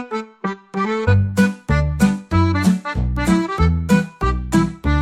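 At 1.07 s there is damaged data in the compressed stream. A short run of the encoded bytes was corrupted. The decoder misread those frames and lost sync, then hunted for the next valid frame header. It is heard as a brief chirp or blip.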